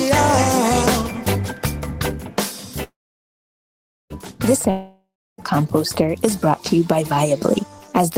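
A call audio freeze runs from 2.83 to 4.13 s. The last sound carries on as a fading buzz, then about 1.17 s of silence, likely because delayed packets drained the jitter buffer. The audio then resumes where it stopped, nothing lost, arriving 1.27 s later than before.

A long network dropout follows at 4.70 to 5.41 s. Again the last sound trails off into a fading buzz, ending in about 0.3 s of silence. When the audio returns, roughly 0.68 s of it is gone for good, likely because no packets arrived.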